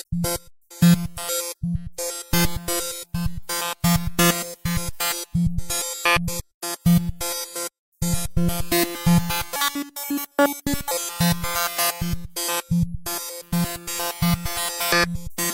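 From 9.56 to 10.91 s the sound jumps about ten semitones higher and hurries along at 1.65 times its normal pace, a section at the wrong speed, likely from playback on a mismatched clock.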